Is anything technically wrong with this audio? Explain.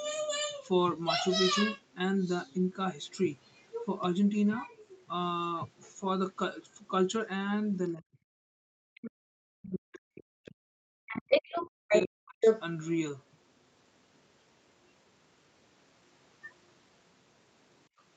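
Yes. Other side's voice leaking through appears at 3.12 to 3.17 s as a very faint scrap, and again at 11.07 to 11.99 s and 12.41 to 12.62 s, where it is louder than the talker. The likely cause is a loudspeaker echo that the echo canceller failed to subtract from the microphone signal.

Speech suppressed in double talk occurs at 7.94 to 8.38 s and 8.76 to 12.43 s. The talker's level drops sharply, by around 40 dB at its deepest. This is likely the canceller mistaking overlapping talk for echo and attenuating everything.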